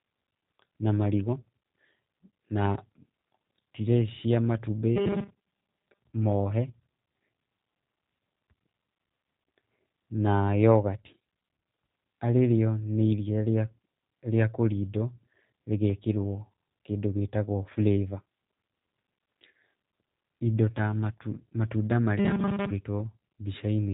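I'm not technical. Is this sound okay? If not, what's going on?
No. The whole clip has passed through the G.729 codec, a phone-call compression method that rebuilds speech from a simplified model and discards everything above about 3.8 kHz. The result is clearly audible: the speech sounds muffled, slightly rough and synthetic throughout.

From 4.96 to 5.99 s, and again from 22.19 to 22.71 s, the speech turns into a rigid metallic buzz pitched at 200 Hz. This is robotic sound from repeated short buffers, likely caused by audio arriving too slowly, so the software loops tiny snippets, about 5 ms each, while most of the real sound in those moments is lost.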